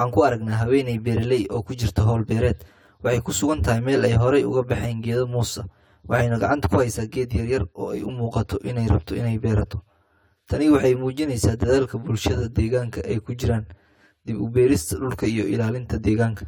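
One channel arrives around 10 ms behind the other, and when the two are summed to mono this channel delay produces comb filtering for the whole length of the speech. Components shared by both channels cancel wherever the lag equals half a cycle, putting the first notch near 50 Hz and further notches about every 100 Hz above it. The result is a fixed, hollow, phasey colouring of the speech throughout.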